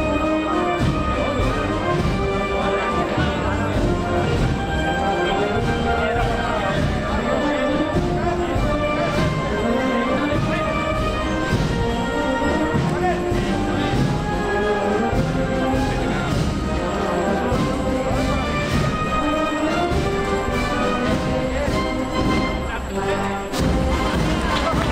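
No technical faults occur at any point in the audio.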